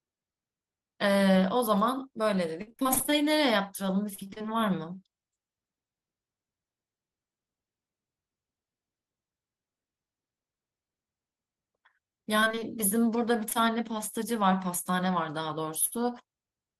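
From 2.61 to 4.53 s there is repeated packet loss, which gives a robotic sound. About twenty short holes hit this stretch, the longest 54 ms. Each is patched by extending the last sound, so roughly a fifth of the span is filled-in audio. The speech turns choppy and robotic. The same fault returns from 12.41 to 13.57 s, with eight smaller gaps of up to 22 ms. It is lighter there but still audibly broken.

At 15.85 s a burst of packet loss begins, lasting until 15.94 s. Around 60 ms of audio never arrived. The receiver held the last sound and faded it. This leaves a brief buzz or hiss, then a jump where speech is missing.

Straight after, from 15.94 to 15.97 s, comes a short concealed packet loss. About 20 ms more was lost and covered by a quick continuation blended back in. It adds a small smear or wobble right at the end of the burst.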